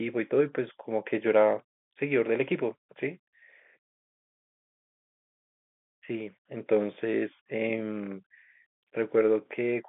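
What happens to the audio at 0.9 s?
Nothing goes wrong at 0.9 s: the speech runs on intact there, with only the narrow, telephone-band sound of G.711 coding carrying it as it does throughout.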